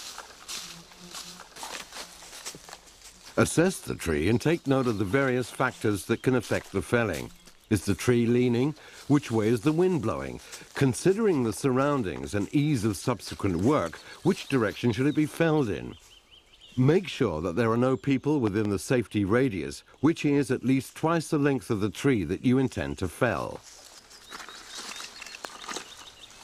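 Loud pops strike twice from 18.47 to 18.67 s and once at 25.45 s, well above the sound. A stray voltage pulse is the likely cause.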